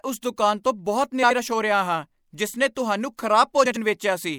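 Speech with two cases of frames out of order, where adjacent runs of frames were decoded in swapped sequence: at 1.23 to 1.39 s (78 ms blocks, which fits three frames each) and at 3.65 to 3.77 s (52 ms blocks, suggesting two frames). Each stretch plays with its halves exchanged, a brief garbled flutter, and no time is lost.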